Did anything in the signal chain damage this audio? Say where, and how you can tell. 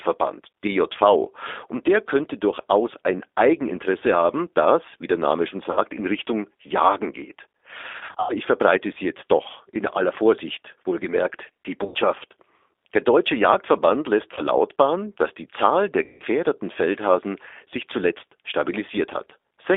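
Yes. The speech sounds slightly rough and synthetic throughout, confined to a narrow phone band of roughly 300 Hz to 3.6 kHz. That points to the codec stage: G.729 at 8 kbit/s rebuilds speech from a vocal-tract filter, pitch predictor and sparse pulses, leaving plainly audible coding damage.

At the network stage, the speech smears into a buzzy tone or coloured noise that fades at 5.71–5.79, 7.99–8.36, 11.85–11.97, 14.34–14.41 and 16.04–16.23 s, with weak, distorted recovery afterward. This is VoIP packet loss concealed by the speech codec. The decoder extrapolated from its last pitch and filter over 50, 190, 90, 30 and 160 ms of lost audio, fitting 10 ms frames.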